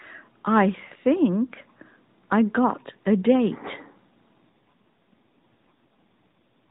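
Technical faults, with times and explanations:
4.50 to 6.68 s, AMR rate drop: The narrowband mobile speech turns rougher, buzzier and more synthetic, with no gap and no change in bandwidth. That fits the codec falling from its 12.2 kbps mode to 4.75 kbps, leaving fewer pulses per frame to model the voice.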